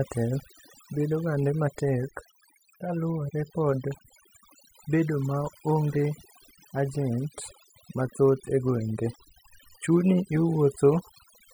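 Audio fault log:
throughout: overdone noise removal. Aggressive denoising gates bands near the noise floor, leaving silent gaps with twinkling specks, unlike dropouts or plain filtering.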